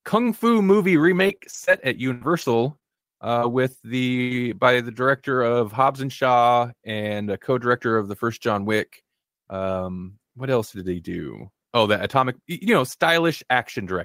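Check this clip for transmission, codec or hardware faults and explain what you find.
Several transmission faults cluster in the first half of this speech clip, all caused by lost audio packets.

Repeated packet loss (robotic sound) occurs at 0.69–1.75 s and 2.79–4.36 s. Packets kept going missing, and each hole was covered by extending the preceding sound. The first stretch has five short gaps, none longer than 23 ms. The second has eight, the longest 80 ms. Both sound choppy, with pieces missing.

A burst of packet loss occurs at 2.13–2.23 s. Consecutive packets were lost, and about 80 ms of audio never arrived. The receiver stretched the last sound over the gap and faded it, so the speech briefly holds as a dying buzz or hiss, then jumps ahead.

There are two lost packets rebuilt from error correction, at 2.21–2.23 s and 2.41–2.43 s. Each missing 20 ms frame was reconstructed from a low-bitrate duplicate carried in the following packet. 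Nothing drops out, but those two moments sound grainier and noisier.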